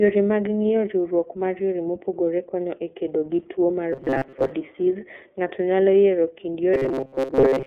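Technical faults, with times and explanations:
Throughout, iLBC codec: the speech sounds thin, boxed-in and slightly rough, with a grainy, synthetic edge that stays plainly audible. Nothing reaches above about 4 kHz, and the usable band sits roughly between 250 Hz and 3.5 kHz, so sibilants lose their hiss and the low body is gone. The coder rebuilds each frame's excitation on its own, without help from the previous frame, which fits its 30 ms mode at 13.33 kbps and leaves that coarse texture.
3.93 to 4.52 s and 6.74 to 7.66 s, robotic sound from repeated short buffers: in both stretches the speech collapses into a rigid, metallic buzz pitched at 133 Hz that still loosely tracks the speech's rhythm. The likely cause is audio arriving too late, with the playback filling the gaps by replaying the last few milliseconds, which fits a buffer of about 7.5 ms. Most of the real audio in these spans is skipped, and the repeating loop imposes its own fixed pitch.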